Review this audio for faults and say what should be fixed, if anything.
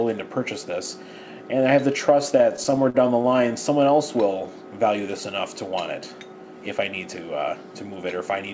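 Repeated stalls (stutter), 2.38 to 3.52 s: late packets kept draining the jitter buffer, so the receiver stretched sound across 13 gaps up to 48 ms, and the audio drags. To prevent it, stabilise packet delivery on the network path or let the jitter buffer hold more delay before playout.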